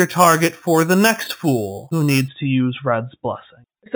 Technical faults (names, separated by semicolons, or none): imaging from sample-and-hold upsampling